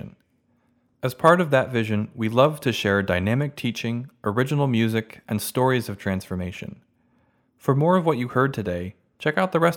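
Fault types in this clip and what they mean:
Dropped samples: a few samples were likely lost from the stream, so the waveform jumps abruptly, giving two brief sharp clicks at 2.45 s and 4.04 s.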